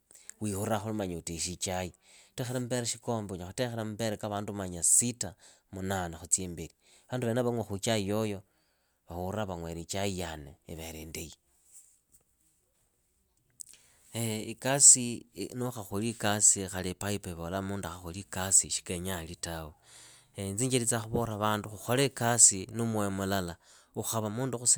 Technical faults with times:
none

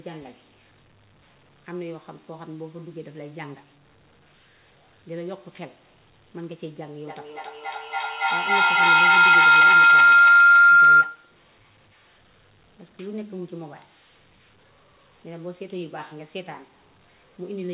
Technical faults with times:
7.07-11.38 feedback howl

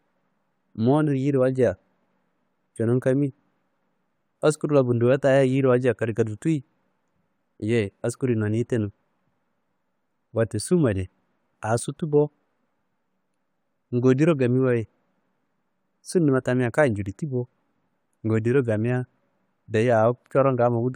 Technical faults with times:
none

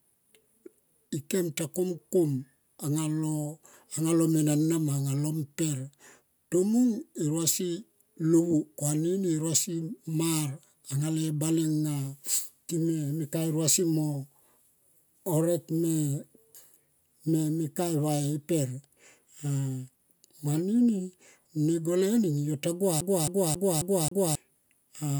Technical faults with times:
23.01-24.35 CD stuck on one turn

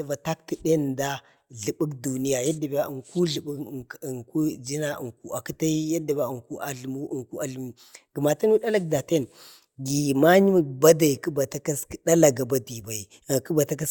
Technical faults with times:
none

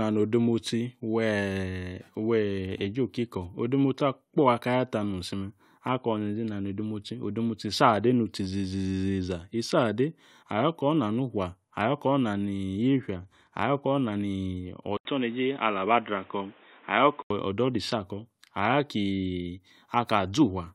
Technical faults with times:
14.97-17.30 input switched to a poorer device

